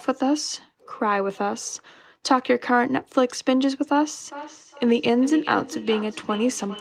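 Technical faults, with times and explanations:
4.26–6.81 s, feedback echo between two devices: the speech returns as a delayed copy roughly every 0.4 s, peaking about 15 dB below the direct sound. A second device in the room is replaying this audio into the microphone, and the echo canceller cannot remove sound another device plays.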